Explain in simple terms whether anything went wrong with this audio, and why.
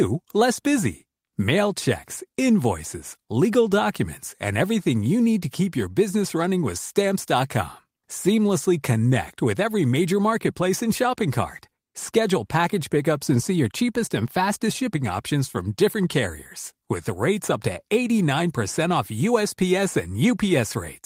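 Nothing went wrong here; no faults turn up anywhere.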